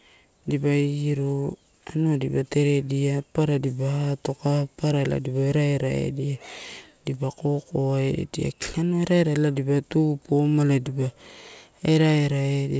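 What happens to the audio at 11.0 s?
At 11.0 s the speech comes through intact, carried by the call path as usual with its G.722 coding and nothing above 8 kHz.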